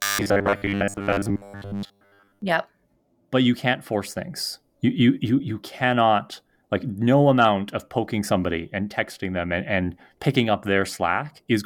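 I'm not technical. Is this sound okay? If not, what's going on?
No. From 0.01 to 2.42 s there's robotic sound from repeated short buffers: a flat, metallic 100 Hz buzz that stays at one pitch, likely from tiny 10 ms audio chunks being repeated.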